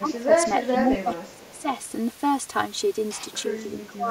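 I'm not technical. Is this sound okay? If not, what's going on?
No. The whole recording sounds hollow and phasey. This is channel delay (comb filtering): one channel runs a few thousandths of a second late, and mixing the two cancels certain pitches.

The voice dips from 0.0 to 0.31 s, 0.81 to 1.68 s, and 3.86 to 4.09 s. This is likely speech suppressed in double talk, where both sides spoke at once.

A faint repeat of the voice arrives about 0.38 s late at 0.73 to 0.78 s and 1.35 to 1.61 s. This is likely echo leak from a loudspeaker on the other end.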